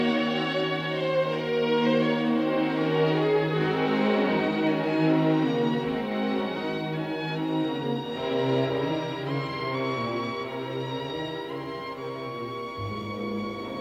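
Two sharp clicks, at 4.67 s and 11.58 s, are dropped samples: most likely a couple of samples went missing, so the waveform jumps abruptly to a later value. Each appears as a thin vertical line across the spectrogram and a tiny step in the waveform.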